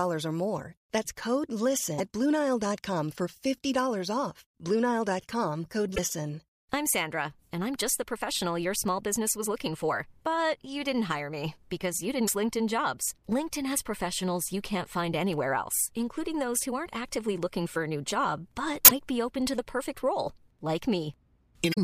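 Five short glitches cut into the speech, at 1.95–2.00, 5.92–5.99, 12.24–12.30, 18.85–18.92 and 21.70–21.78 s, each a brief blip of damaged data in the compressed stream. The decoder hits corrupted frames, loses sync and hunts for the next valid header.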